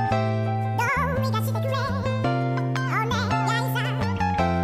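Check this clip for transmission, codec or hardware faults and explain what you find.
There's one fault, and it runs the whole way through: the audio was read two samples at a time (double speed). Each pair of samples got treated as a single frame, so it plays twice as fast and a full octave up, 12 semitones.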